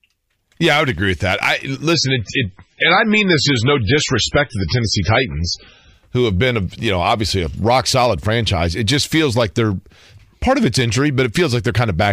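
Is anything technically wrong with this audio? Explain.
Yes. From 1.94 to 5.94 s the speech turns dull and swirly, with nothing above 10.2 kHz, because an adaptive stream at a lower bitrate briefly played, consistent with a fall to roughly 16 kbit/s MP3.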